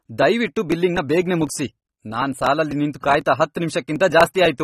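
From the start the speech sounds dull and smeared, with a warbling, fizzy texture on sustained sounds and sibilants, and nothing is present above 13.8 kHz. This is likely AAC compression. An AAC-LC encoder working at a low rate, which fits around 32 kbps, lowers its bandwidth and quantises the spectrum coarsely. That leaves gaps or substitute noise in the upper bands, and the damage is plainly audible.

From 0.22 s to 4.46 s there is a steady run of small ticks, about twenty of them, spaced every 0.25 s and audible only while the speech is sounding. These are periodic USB or driver dropouts. At each tick something blocked the audio path on a fixed schedule, and roughly a millisecond of signal was skipped outright rather than filled with silence. The sudden jump in the waveform produces the click.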